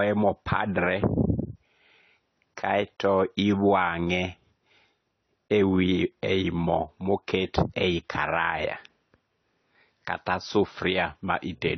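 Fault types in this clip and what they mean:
Transcoding between lossy codecs: Nothing is present above 6.1 kHz for the whole clip, and the speech carries two layers of coding damage at once: the artefacts of both codecs heard together, alongside a dull, band-limited top. The likely cause is a low-rate MP3 encode re-encoded to AAC-LC, which fits roughly 35 and 32 kbit/s. The second codec spends its limited bits reproducing the first codec's artefacts, adds its own, and keeps the lowest bandwidth limit in the chain.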